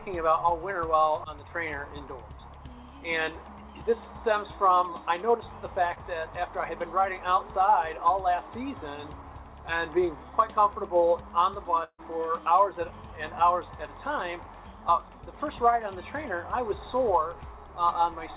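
Short concealed packet loss at 5.94 to 5.98 s: roughly 20 ms of audio failed to reach the decoder in time. The receiver filled the hole by extending the preceding sound for about 17 ms, then crossfaded back into the real signal. The result is a brief smear or tiny wobble. The band stops at 4 kHz, which fits a G.711 A-law path.

Burst of packet loss at 11.84 to 12.00 s: several consecutive packets went missing, about 140 ms of audio in all. The receiver spent about 145 ms continuing the last sound and fading it, giving a held buzz or hiss that dies away. That fill ends in roughly 50 ms of silence before the sound resumes further on. Whatever fell inside that stretch is gone.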